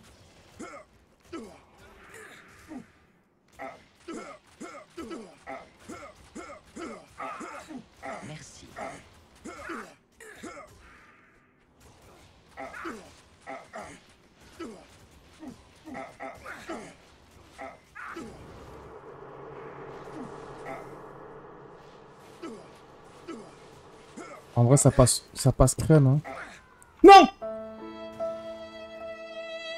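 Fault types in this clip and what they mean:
No technical faults can be heard anywhere in the signal.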